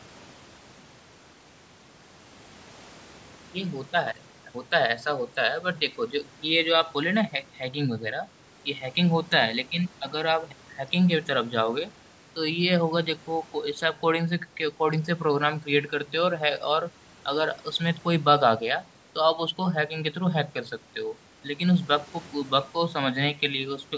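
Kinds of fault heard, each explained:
No faults heard in this speech.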